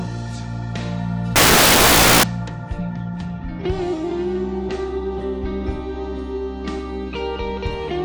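From 1.36 s to 2.23 s the sound gives way to loud, harsh broadband noise, the signature of samples built from the wrong bytes. Each sample has been assembled from misordered or misaligned bytes, so the rapidly fluctuating low-order bits now dominate every value. On a spectrogram this span fills with dense energy across the whole frequency range, and the waveform becomes a solid, loud block of random values.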